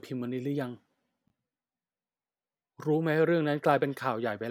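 At 1.26 s, chunks play out of order until 1.30 s. A 20 ms chunk arrived one slot late and plays after the chunk that should follow it. No audio is lost. The swap leaves three hard joins, heard as a brief jumbled blip.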